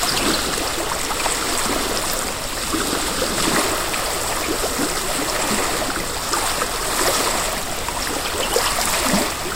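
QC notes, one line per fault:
Nothing to flag here; the sound comes across with no problems worth noting anywhere in the clip.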